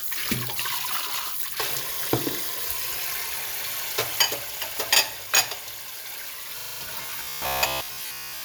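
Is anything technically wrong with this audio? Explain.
Yes, two faults are audible.

System hang loop, 6.6 to 6.8 s: the playback stalled while the hardware kept replaying its ring buffer, so one 40 ms slice repeats five times, giving a rattling stutter at 25 Hz with almost nothing of the sound lost.

Robotic sound from repeated short buffers, 7.03 to 8.44 s: the sound takes on a rigid, metallic 66.8 Hz buzz. This is likely caused by audio arriving too seldom, with the software filling the gaps by repeating a slice of about 15 ms, so most of this stretch is repeated material.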